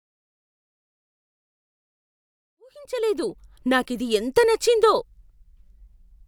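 It's a speech recording with nothing technically wrong to report, just a gentle fade-in that starts at around two and a half seconds and reaches full level by 3.7 s.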